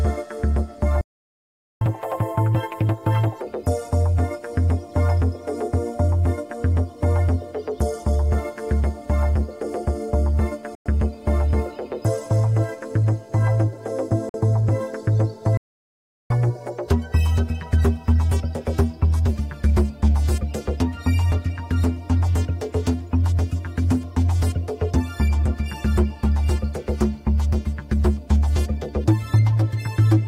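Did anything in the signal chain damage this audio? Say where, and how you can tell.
Yes. The sound drops out at 1.01 to 1.81 s and again at 15.57 to 16.30 s, both playback stalls, likely the player starving for data or being blocked.

Right after each stall, the audio races and rises in pitch, a catch-up at higher speed. From 1.81 to 3.41 s it runs 1.5 times fast, about seven semitones sharp. From 16.30 to 19.30 s it runs 1.1 times fast, about a semitone and a half sharp.

Brief silences at 10.75 s (106 ms) and 14.29 s (50 ms) are Bluetooth stalls, likely from delayed wireless packets emptying the headphones' buffer.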